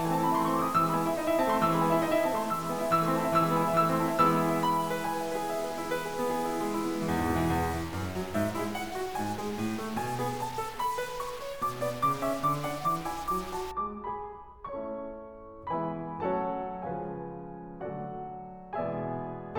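A stuck bit runs from 0 to 13.71 s of the music, heard as harsh, buzzy distortion over the sound, with noise filling the quiet moments. The likely cause is one data bit held fixed, offsetting about half the samples by roughly -40 dBFS.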